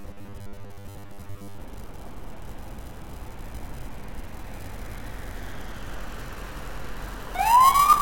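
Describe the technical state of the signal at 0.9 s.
At 0.9 s the signal has robotic sound from repeated short buffers, running from 0.01 to 1.6 s. It is a rigid, metallic buzz at 100 Hz. This is likely caused by one 10 ms stretch being replayed to fill gaps. Most of the real audio there is skipped.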